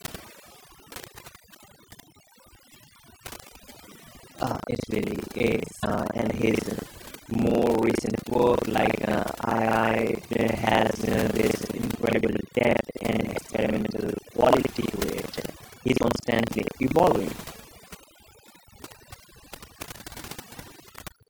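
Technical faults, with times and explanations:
Throughout: overdone noise removal. The noise reduction was set far too hard, so individual frequency bands near the noise estimate are pulled down or shut off, taking quiet parts of the speech with them. Background drops and breaks up into twinkling specks.
Throughout: buffer tearing. The writing program and the playback hardware have drifted and cross inside every buffer period, giving a robotic 25 Hz buzz that sounds only while speech is present. Roughly a third of each buffer repeats audio from about 70 ms earlier, with hard joins either side.
5.82, 12.09, 13.36, 14.82 and 16.00 s: broken MP3 bit reservoir. Each time, the audio jumps ahead and a short chirp, burst of noise or hole of about 25 ms follows, roughly one 24 ms frame. This is likely frames cut from the stream, leaving the next frame to borrow reservoir bytes that belong elsewhere.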